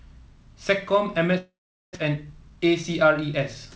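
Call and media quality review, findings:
Long network dropout, 1.38 to 1.97 s: sound smears into a fading buzz, then about 430 ms of near silence; resumes with roughly 400 ms of speech gone. Likely packet loss with receiver concealment, delay shifting about 150 ms.

Jitter buffer speed-up, 2.09 to 3.76 s: speech runs about 6% fast, pitch unchanged, slightly hurried. Buffer draining backlog after the gap by cutting short pitch-period slices, roughly 100 ms removed overall. Band limit near 8 kHz throughout fits the call codec.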